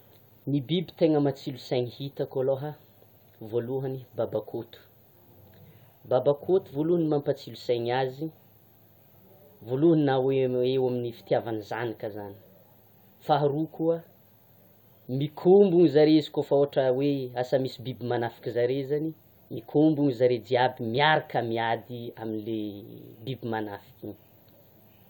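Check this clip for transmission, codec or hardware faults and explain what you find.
Nothing turned up here: the speech runs along steadily with no transmission, codec or hardware trouble to point at.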